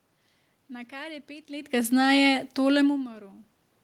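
No technical faults are audible in this speech recording.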